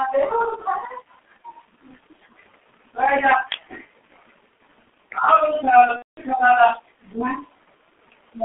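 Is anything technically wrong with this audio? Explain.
Yes. The speech has two faults, one lasting the whole clip and one brief event.

Throughout, the sound carries heavy G.723.1 codec damage. The band is confined to roughly 250 Hz to 3.5 kHz, so it sounds thin and muffled. The speech takes on a hoarse, rough texture, and consonants smear together. That fits a low-rate model-based coder running near 6.3 kbit/s. It describes the voice with a simplified excitation and filter refreshed only every 30 ms, so fine detail and fast transitions are lost.

From 5.96 to 6.18 s there is VoIP packet loss concealed by the speech codec, a gap of about 210 ms, which fits seven lost 30 ms frames. With no incoming data, the decoder keeps repeating its last pitch and spectral shape while reducing the level. The audio stretches into a fading extrapolated sound, and from the third lost frame onward it is muted. 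Recovery is gradual because each frame depends on the previous one, so the speech stays weak or distorted briefly after 6.18 s.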